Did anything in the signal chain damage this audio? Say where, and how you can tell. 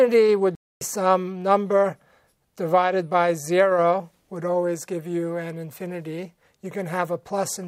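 Yes, at the playback stage: a playback stall silences the output from 0.55 to 0.81 s, a gap of about 260 ms in mid-flow before the audio resumes. The likely cause is the player running out of buffered data or its thread being blocked until it recovered.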